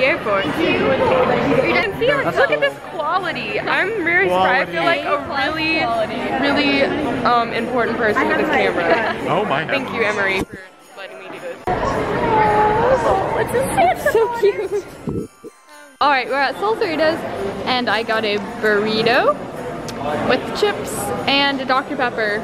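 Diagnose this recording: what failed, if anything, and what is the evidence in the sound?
Nothing in the recording points to a failure at any stage of the signal chain. There is no event in the sound that calls for a diagnosis.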